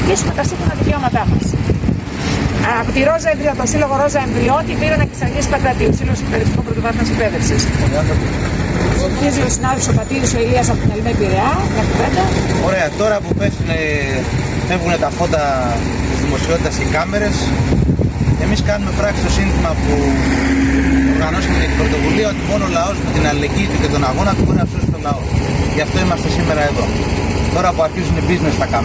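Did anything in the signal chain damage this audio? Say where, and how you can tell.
Yes, there's gain pumping across the whole clip. The gain swings by around 10 dB, and everything sounds squashed. Likely cause: input gain set far too high, with a fast limiter clamping down on each peak.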